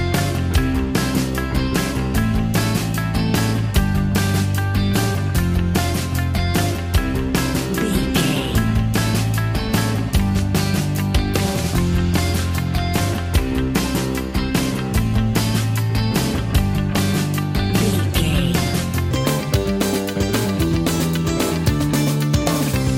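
Wrong sample rate from 19.11 s to the end: the sound plays 1.5 times too fast and about 7 semitones high, which fits 32 kHz material played at 48 kHz.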